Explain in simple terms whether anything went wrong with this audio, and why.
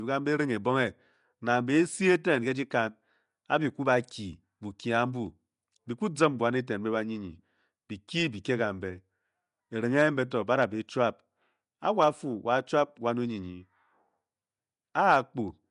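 Yes, something went wrong, and it lasts the whole recording. The speech has a rough, hissy fuzz around it and a smeared, underwater quality, and nothing above about 10.6 kHz remains, so it lacks crispness. This is Nellymoser compression damage, likely from the Nellymoser Asao codec once used for Flash microphones. It squeezes sound into small chunks on a tight budget, gives quiet frequency ranges nothing, and fills those gaps with noise instead.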